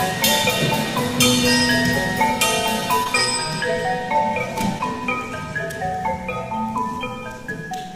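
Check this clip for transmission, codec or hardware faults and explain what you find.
Two instances of short concealed packet loss, at 3.03 to 3.07 s and 4.78 to 4.81 s. Each time, about 20 ms of audio failed to reach the decoder in time. The receiver covered the gap by extending the preceding sound, either continuing its pitch or substituting shaped noise, for 20 ms in the first case and 10 ms in the second, then blended back into the real signal. The result is a brief smear or wobble at each point.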